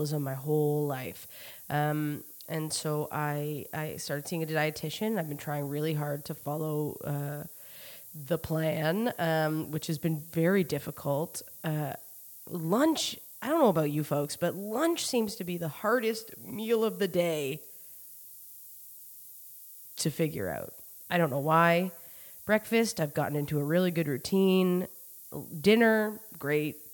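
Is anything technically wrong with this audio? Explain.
Yes. Throughout the speech there is low bit depth with noise shaping: the samples sound like they are held to about 7 bits, and the rounding error is pushed upward in frequency rather than left flat. The result is a constant, thin hiss that grows sharply toward the top of the band, sitting roughly 15 dB below the signal. On a spectrogram it shows as a noise floor that brightens steadily with frequency across the whole clip, and on the waveform as a fuzzy band that never drops to silence.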